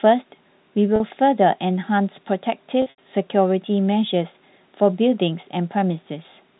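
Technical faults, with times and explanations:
0.96–1.00 s and 2.82–2.98 s, packet loss with pitch repetition: gaps of 40 ms, then 120 ms in bursts, are filled by a repeated pitch period, heard as a held buzz fading out, which on the longer 80 ms run fades into brief silence before the speech cross-fades back.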